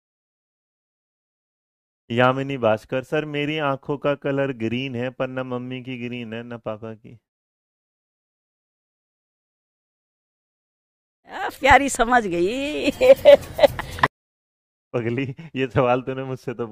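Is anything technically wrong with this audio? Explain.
Yes, there's a loud pop. Between 11.71 and 11.98 s you get two sharp pops in quick succession, peaking roughly 5 dB above the surrounding sound, which keeps going underneath them. That's likely a sudden voltage step or pulse getting into the signal, say from a plug, a switch, static or a driver hiccup. The circuitry after it shapes that pulse into a short, punchy click-thump that sits on top of the audio.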